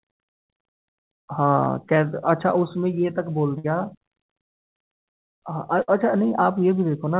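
A speech recording carried over a call path whose G.711 mu-law coding leaves an empty spectrogram above 4 kHz, with three dropouts. The first is a short concealed packet loss at 1.64 to 1.68 s: about 20 ms never arrived and was patched by extending the previous sound. It shows as a brief smear, with a slightly blurred column on the spectrogram. Two bursts of packet loss follow, at 3.58 to 3.66 s and 5.82 to 5.90 s. Each lost about 60 ms, which the receiver filled with a held buzz or hiss that fades before the speech resumes further on. The waveform shows a decaying, overly regular stretch there, and the spectrogram shows smoothed, unchanging bands instead of natural movement.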